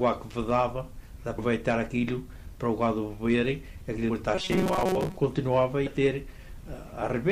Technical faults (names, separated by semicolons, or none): compressed frames skipped; robotic sound from repeated short buffers